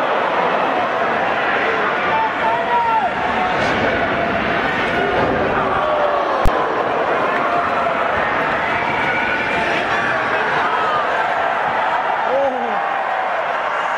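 At 6.46 s a single loud bang comes from invalid numbers at full scale: a calculation produced infinite or invalid values that were forced to the maximum level for a block of about 20 ms. Unlike ordinary clipping, nothing of the underlying sound survives in that block.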